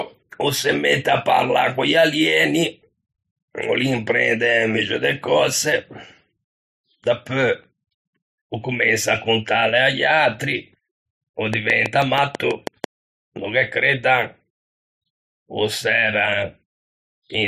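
A regular ticking cuts across this speech clip from 11.54 to 12.85 s, around ten sharp pops at about 6.1 per second, standing well above the voice and ending just before "no ghe creddan". This train of clicks is likely interference or a faulty connection injecting repeated pulses.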